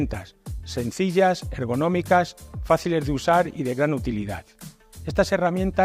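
No technical faults can be heard anywhere in the audio.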